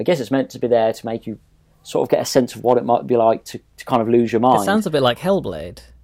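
A stage overloaded by about 1 to 2 dB and cut the peaks flat, so hard clipping adds crackle on peaks to the speech at 2.14–3.29 s, 3.94–3.96 s and 4.46–4.55 s.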